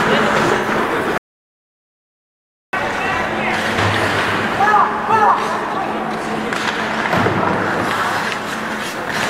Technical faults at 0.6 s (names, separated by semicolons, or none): AAC frame loss with concealment